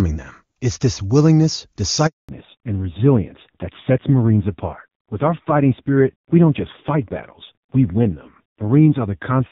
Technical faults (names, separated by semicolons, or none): handover gap; fallback to narrowband